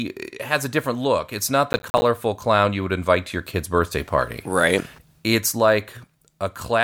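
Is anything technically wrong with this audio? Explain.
Yes. From 1.73 to 2.02 s the speech is torn by a gritty burst of crackle. This is processor overload crackle. The processor repeatedly missed its buffer deadlines, and each miss left a short hard-edged dropout to silence. The spacing fits buffers of roughly 10 ms, with around fifteen missed across the burst.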